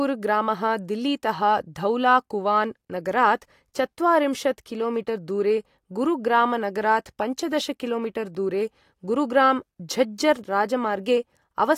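At 8.35 s a 0.67 ms block of digital silence, fitting a 32-sample buffer, hard-cuts the speech: one sharp tick, not a faded dropout.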